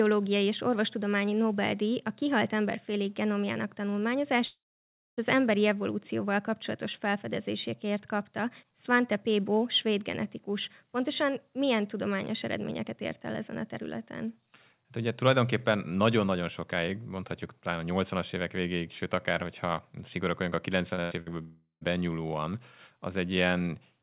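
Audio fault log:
4.46–5.19 s, long network dropout: the sound cuts out for about 0.72 s. The last bit carries on as a fading buzz, then there's about 0.59 s of near silence before it picks up again at "az emberi evolúcióval kapcsolatos". The likely cause is the connection stalling, so that stretch never arrived and is simply gone.
20.95–20.99 s, short concealed packet loss: a quick smear where about 20 ms of audio went missing. The receiver papered over it by extending the previous sound, then blended back into the real signal, so you hear a tiny wobble rather than a gap.
21.01–21.13 s and 21.21–21.28 s, burst of packet loss: roughly 100 ms and then 60 ms lost in a row. Each time the receiver stretches the last sound and turns it down, giving a short held buzz or dying hiss. The audio then jumps ahead with that bit missing.
21.42–21.83 s, long network dropout: about 0.38 s lost right after those bursts. 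The concealment buzz fades into roughly 0.11 s of quiet before sound returns further on. Likely the same shaky link stalling outright this time.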